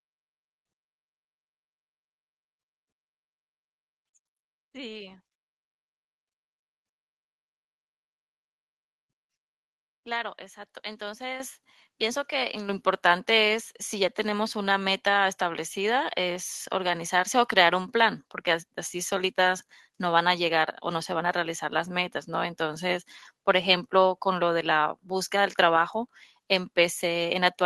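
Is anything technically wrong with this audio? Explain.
Yes. At 11.4 s and again at 12.69 s, the microphone volume is stepped up, by about 9 dB and then about 6 dB. The call software judged the input too quiet and raised the device gain abruptly. The voice and the background noise floor jump together, which distinguishes it from a talker leaning closer or a smooth automatic gain ramp.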